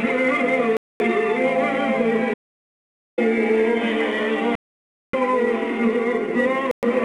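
The audio is interrupted four times, by two different kinds of fault. Three gaps sound like a Bluetooth dropout: 0.77 to 1.02 s (about 232 ms), 4.55 to 5.15 s (about 581 ms) and 6.71 to 6.84 s (about 116 ms). The likely cause is audio packets that reached the headphones too late and were discarded, so the output fell silent until good packets arrived. The sound then picks up further along, as though it had kept playing. The gap lengths fit roughly ten, twenty-five and five lost packets of about 23 ms each. On a waveform each appears as a flat line. On a spectrogram each is a blank vertical column with sharp or briefly faded edges. The longer gap, from 2.34 to 3.18 s (about 838 ms), is an audio dropout to silence. The input was likely lost for that stretch, through a disconnected device, a failed link or an accidental mute, while the recorder kept writing silence. Whatever sounded in the meantime is gone. 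The waveform flattens completely, and the spectrogram shows an empty band with no room tone left in it.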